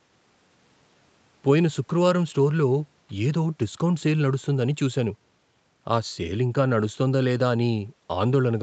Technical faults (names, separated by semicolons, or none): none